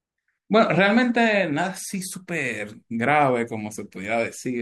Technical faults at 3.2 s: none

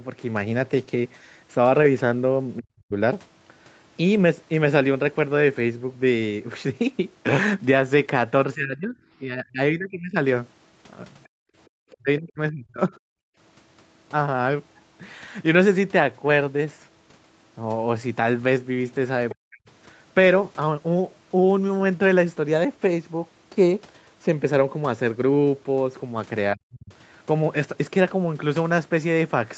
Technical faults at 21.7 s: none

